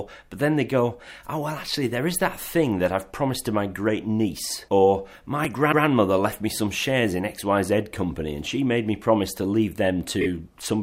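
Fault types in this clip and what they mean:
Dropped buffer (overrun): at 5.45 s a small jump in the sound, likely from samples being overwritten before they were read, losing only a millisecond or two. The waveform shows a sudden step, and the spectrogram shows a thin vertical broadband line.
Repeated frames: a stretch of compressed audio replays as a stutter. A 130.6 ms block from 5.71 to 5.84 s plays once more, and a 26.1 ms block at 10.2 s plays twice more. The spectrogram shows identical patterns side by side.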